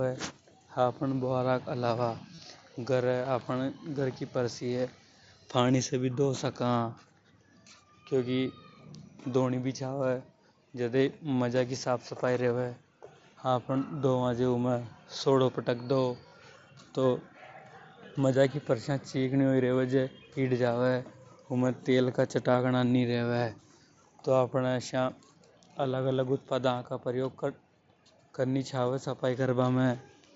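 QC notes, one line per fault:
2.34–2.39 s, concealed Bluetooth headset packet loss: about 37.5 ms of audio is missing, which fits five lost headset packets. The receiver repeats a recent stretch of waveform, giving a brief buzzy hold and a small warble on recovery.
16.28–16.32 s, concealed Bluetooth headset packet loss: about 37.5 ms is again replaced by a looped copy of the preceding waveform, heard as a short steady buzz before the real audio resumes.
22.52–22.54 s, concealed Bluetooth headset packet loss: right after "उमे तेल का", about 22.5 ms is missing, which points to three lost packets. The repeated waveform fill is shorter.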